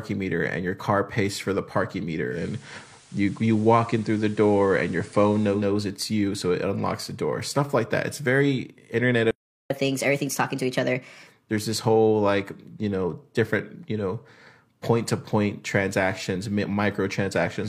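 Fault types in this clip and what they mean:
digital radio blending to analogue: Just after "pays for the parking", at about 2.28 s, the audio cross-fades over 166 ms from the digital stream to the station's FM broadcast, then returns by "it's you so it" at about 5.66 s. During that stretch a steady hiss sits about 30 dB below the signal, and the level shifts by about 2 dB. The sound never breaks, which separates this from a dropout or stall.
playback stall: After "that it's very internet", the sound stops dead in mid-flow at 9.31 s and stays silent for 393 ms, until 9.70 s. The cause is likely the player running out of data or having its thread blocked. Its abruptness tells it apart from a natural pause. So does the fact that it ends in a burst of fast playback rather than normal-speed continuation, since a natural pause would simply resume at ordinary pace.
catch-up at higher speed: Right after the silence, from 9.70 to 11.28 s, the audio plays back at 1.25 times normal speed. 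The pitch rises by roughly four semitones as the player works through its backlog. It drops back to normal just before "there's this whole like". Tempo and pitch rise together, which sets this apart from a pure pitch-shift fault. Its placement directly after the stall marks it as recovery of lost time.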